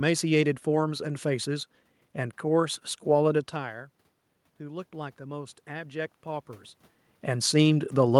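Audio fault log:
4.58 to 6.54 s, automatic gain rising: the voice and the room noise behind it swell together by about 4 dB over two seconds. The input had fallen by about 16 dB, so the gain control gradually raised its level to compensate.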